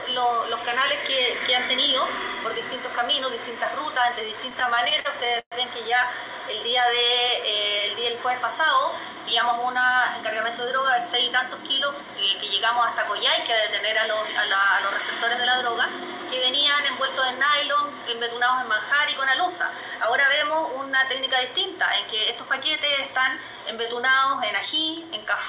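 Repeated stalls (stutter) run from 4.5 to 5.54 s. Audio arrived later than it was played, so the jitter buffer kept running dry. The receiver stretched the last sound to cover each wait, the longest 119 ms, filling about 28% of that stretch. Nothing is lost, but the audio drags and judders.

Jitter buffer speed-up occurs at 21.52–23.43 s and again at 24.65–25.25 s. Too much audio had built up, so the receiver trimmed tiny pitch-period slices to reduce delay: about a tenth of a second at 105% speed, then roughly 70 ms at 110%. Pitch holds while pacing sounds hurried. Throughout, the narrowband call path leaves nothing above 4 kHz, which fits G.711 mu-law.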